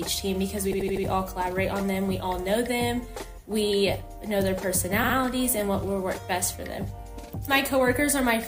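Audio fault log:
0.73–1.05 s and 5.03–5.15 s, repeated frames. The same compressed frames reach the decoder again. An 80 ms block plays four extra times, then a 60 ms block twice more. Each is heard as a stutter. About 0.44 s is added.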